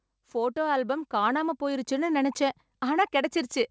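From 0.11 s to 2.18 s the speech and the background behind it swell together, growing about 6 dB louder over roughly two seconds rather than jumping at once. This is automatic gain rising: the gain control judged the incoming level too low and eased its amplification upward. Because it scales the whole signal, background noise climbs with the voice. Through the G.722 call path, nothing is heard above 8 kHz.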